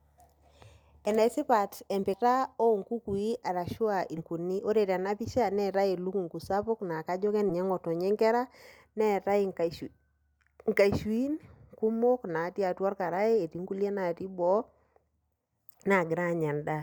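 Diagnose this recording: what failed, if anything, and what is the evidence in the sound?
Compressed frames skipped at 2.13–2.16 s, 4.17–4.21 s and 7.49 s, between "elukungu sapuk naa kajo" and "ngotonye nkera neetae". At the codec stage, whole 20 ms frames were dropped, so speech leaps ahead roughly 200 ms, 300 ms and under 100 ms.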